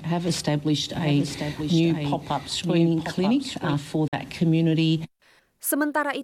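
A second capture path or misaligned edit likely mixed the audio in twice, producing a doubled audio track from 0.94 to 3.74 s: a clean copy about 5 dB quieter trails roughly a second behind, starting and stopping abruptly. Late packets likely never reached the headphones at 4.08 s, a Bluetooth dropout leaving a 46 ms silent hole, consistent with two lost packets, before sound resumes further along.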